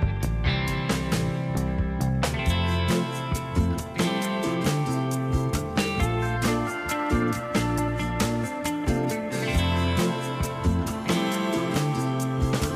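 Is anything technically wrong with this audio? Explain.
Yes. At 7.78 s there is audio missing between chunks: a brief piece drops out and the two sides butt together with no gap, giving a small skip. The likely cause is a recorder working in 4.0 s chunks losing audio at a chunk boundary.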